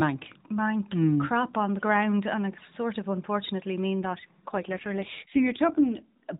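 An AMR rate drop from 4.02 to 6.16 s makes the speech rougher and more synthetic, with no gap or band change, which fits the narrowband mobile codec falling from 12.2 to about 5.9 kbps.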